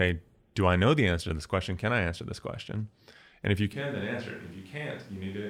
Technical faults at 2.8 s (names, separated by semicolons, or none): none